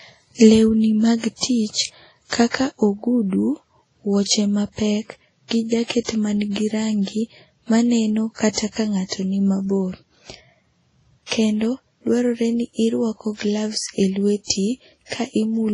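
Throughout this speech clip the sound is dull and smeared, with nothing above 10.5 kHz and two layers of swirling, watery artefacts heard together. The likely cause is transcoding between lossy codecs: a low-rate MP3 pass re-encoded as Vorbis, fitting roughly 32 then 25 kbit/s.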